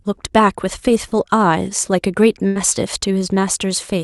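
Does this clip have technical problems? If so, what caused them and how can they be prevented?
Yes. Between 1.07 and 1.14 s the speech briefly smears and wobbles. This is short concealed packet loss. About 40 ms of the call arrived too late or not at all, so the decoder continued the preceding sound and then blended back into the real signal. A more stable network connection or a slightly deeper jitter buffer would prevent it.

From 2.47 to 2.58 s the last sound is held and fades away before the speech resumes further along. This is a burst of packet loss. Roughly 80 ms of consecutive audio went missing, and the receiver stretched the last sound while lowering its level, so that stretch of speech is simply gone. Enabling forward error correction and prioritising call traffic on the network would prevent it.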